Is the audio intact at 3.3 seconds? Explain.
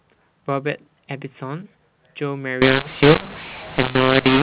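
No. From 2.62 s to the end, mu-law and A-law are mixed up: A-law telephone samples decoded as mu-law scramble levels, making the sound harsh and noise-filled in pauses, unlike faint, level-following G.711 quantisation noise.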